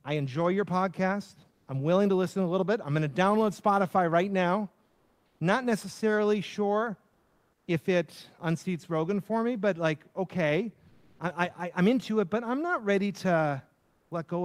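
A transmitter likely using Opus discontinuous transmission stopped sending during pauses in the speech, so comfort noise replaced the background at 1.53, 4.85, 7.13, 10.89 and 13.79 s, for 0.14 to 0.54 s. Each gap turns flat and featureless, about 2 to 7 dB louder or quieter.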